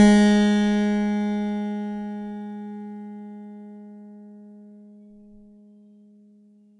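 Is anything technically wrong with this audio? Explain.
Yes. Throughout the music, 4-bit ADPCM compression is plainly audible. Each sample is coded as a coarse 4-bit step from a prediction, so a gritty hiss rises and falls with the level, and sharp attacks smear where the step size lags. Nothing remains above 10.6 kHz, which fits a sample rate near 22 kHz. On a spectrogram, a level-following noise haze fills the band beneath a hard ceiling at 10.6 kHz.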